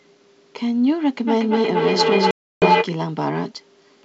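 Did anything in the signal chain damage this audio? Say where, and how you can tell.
Yes. Feedback howl from 1.27 to 2.93 s, in call processing: a tone near 1 kHz, pulsing roughly every 200 ms, swells to about 4 dB above the speech as the room loop keeps gaining.

Packet loss on an ADPCM call from 2.31 to 2.66 s, on the network: a hard-edged 310 ms silent gap, probably around thirty packets, leaves the G.722 decoder's predictor out of step when sound resumes.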